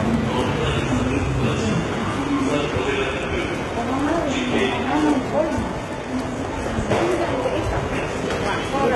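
Throughout the clip, the high end sounds false: fine detail turns gritty and metallic, and nothing reaches above 11.7 kHz. This is likely HE-AAC compression rebuilding the treble from copied lower bands, with heavy damage that fits a 16 kbps stream.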